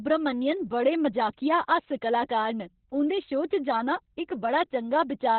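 Speech, squeezed hard by Opus voice compression the whole way through. There's nothing above about 4.2 kHz, so it's narrowband and muffled, and the coarse SILK excitation leaves it hoarse and a bit robotic, which fits a bitrate down around 8 kbps.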